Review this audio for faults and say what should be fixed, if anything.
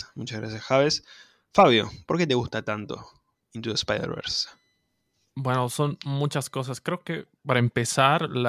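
Nothing needs fixing: the speech signal holds steady throughout, with no audible interruptions, level jumps, or distortion anywhere in the recording.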